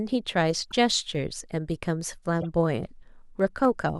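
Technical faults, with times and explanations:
0.15 to 3.90 s, periodic USB or driver dropouts: a small, regular tick recurs every 0.25 s through the speech, about fifteen times in all, each a tiny skip. A background task is stalling the USB bus or audio driver on a fixed schedule, and a sliver of roughly a tenth of a millisecond is dropped outright each time, leaving a seam.
0.63 to 0.73 s, corrupt frame decoded: a faint chirp-like blip, around -35 dBFS at its peak, lasts about a tenth of a second. A few compressed frames carried flipped bits, and the decoder played them anyway, putting energy at misread frequencies for the span of the damaged frames.
2.41 to 2.45 s, corrupt frame decoded: a shorter but louder squeak, peaking around -20 dBFS, lasting roughly 40 ms. Again damaged frames, here about two, were decoded as if intact, so wrongly read gains and codes produced a brief burst at the wrong frequencies.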